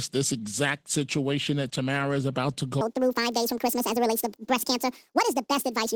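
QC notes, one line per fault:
throughout: Opus voice compression. The coding damage is plainly audible across the whole clip. The sound has the hoarse, slightly robotic grain of coarsely coded excitation. That texture points to a bitrate of around 16 kbps. The band stays full, so this is not simple muffling. The lower band is carried by linear prediction, with a transform layer above 8 kHz. The short 20 ms frames are too starved of bits to hold fine detail.
2.81 s to end: section at the wrong speed. Right after "is about to", the audio suddenly runs 1.74 times too fast until the clip ends. Speed and pitch rise together. The sound turns hurried and high, roughly ten semitones above where it was. Nothing holds the pitch steady, so the shift is plain. This is likely a playback or edit clocked to the wrong rate for this stretch.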